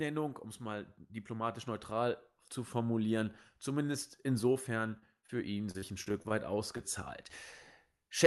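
Speech, carried over an Opus call path whose coding tops out around 12 kHz. Right after "zu formulieren zumindest insofern", the sound turns choppy and robotic from 4.99 to 5.30 s and again from 5.71 to 6.32 s. This is repeated packet loss: gaps of up to 26 ms and 40 ms were patched by extending the preceding sound, covering about a quarter of each stretch. At 6.77 to 6.81 s a brief smear marks short concealed packet loss, where about 20 ms never arrived and was filled by continuing the last sound.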